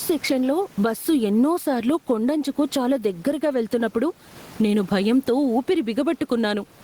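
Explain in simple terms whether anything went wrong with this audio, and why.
Gain pumping runs through the whole clip. The room's faint background noise is normal, but the level is pulled down on every loud sound, so loud and soft parts end up squashed closer together, likely from too much gain with a fast limiter.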